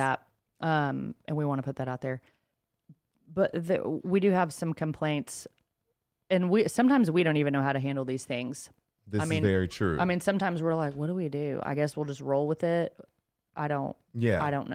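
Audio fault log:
No faults on this speech clip; the Opus voice compression path runs at 24 kbps in hybrid mode with the full band kept, leaving only light coding traces.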